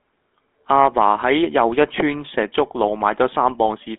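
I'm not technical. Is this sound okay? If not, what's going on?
No. The speech has passed through the GSM full-rate codec, an early mobile-phone voice coder, for its whole length. It keeps only roughly 250 Hz to 3.5 kHz and rebuilds the voice from a simplified pulse pattern, so it sounds thin, buzzy and gravelly.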